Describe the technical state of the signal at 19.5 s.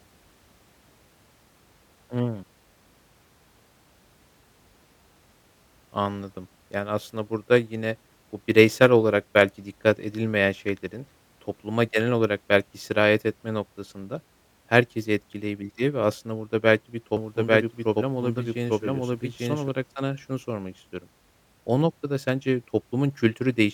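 At 19.5 s a doubled audio track is sounding, spanning 17.17 to 19.69 s, from just after "aslında burada belki bir" until "sana şunu sormak istiyorum". A second, full-band copy about as loud as the original trails it by roughly a second, with no reverb tail. The copy likely comes from a slower second capture path. It cuts in and out abruptly.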